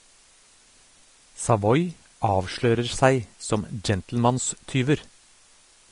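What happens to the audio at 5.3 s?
At 5.3 s the speech carries a steady, even hiss with no distortion. This is low bit depth with dither. The signal keeps only 9 bits, and dither randomises the rounding error into white noise, roughly 30 dB below the speech. It runs through the whole clip, not just this moment.

The speech also sounds grainy and roughened, with softened consonant attacks and nothing above 10.6 kHz. Vorbis compression is the likely cause. It suggests a low bitrate near 34 kbps. At that rate the treble is cut off and coarsely quantised, so fine detail turns into noise. This too lasts the whole clip.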